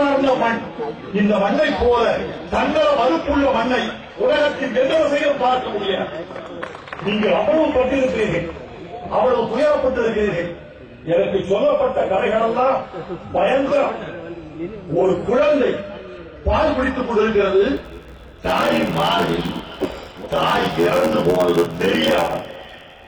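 A block size mismatch (padded) sets in at 17.76 s and lasts to the end at 23.07 s. One stage hands over blocks shorter than the next stage reads, and the remainder of each is filled with silence, which fits a 512-sample read block. The audio gains a buzz at about 86.1 Hz from those repeated gaps, and it drags to 0.861 times its normal speed while its timbre stays.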